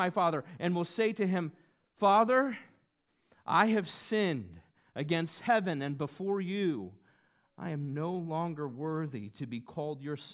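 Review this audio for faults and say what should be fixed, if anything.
No faults found; nothing here needs fixing.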